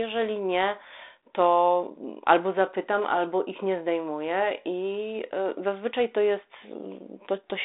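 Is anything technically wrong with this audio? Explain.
No, nothing here is actually wrong: the speech just has the narrow telephone sound of 32 kbit/s G.726 ADPCM, as on a DECT cordless line, with the band running from about 250 Hz to 3.7 kHz and nothing coming through above 3.8 kHz, and that's simply how such a line carries it.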